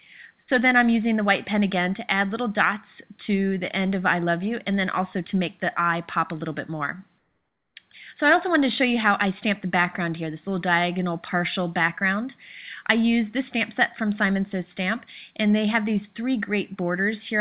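From 7.18 to 7.76 s the background turns into steady, featureless noise about 6 dB quieter, likely comfort noise in place of the background during a discontinuous-transmission pause.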